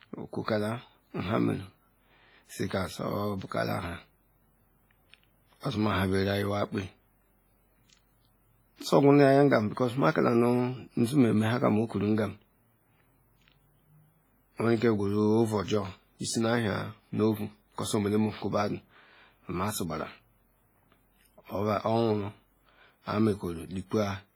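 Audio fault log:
throughout WMA compression: heavy ringing and a washy hiss that rises and falls with the speech, smeared over tens of milliseconds, which fits a likely WMA encode near 24 kbps. Unlike a simple low-pass, content still reaches 21.4 kHz while weak detail vanishes.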